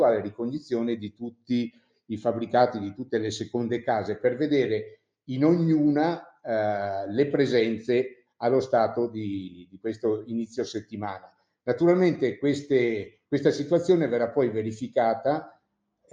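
Throughout, the sound pumps and thins, held material sagging while attacks punch through, with level swinging about 10 dB; a noise suppressor built for speech has been applied to music or sounds, treating steady tones and tails as noise to remove.

Sound cut by the noise suppressor shows as dips where sustained or decaying sound sinks: at 0.31 to 0.72 s, by about 14 dB; then at 1.04 to 2.10 s, 4.92 to 5.29 s, 8.15 to 8.41 s, 9.49 to 11.67 s and 15.49 to 16.13 s, each bottoming out around 21 dB down.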